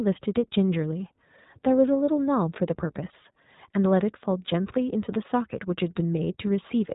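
From start to finish the speech carries iLBC codec damage, plainly audible. Nothing reaches above roughly 3.8 kHz, so sibilants and breath lose their air. Each short frame, consistent with 20 ms, is coded independently, leaving a rough, slightly synthetic edge that fits a 15.2 kbps stream.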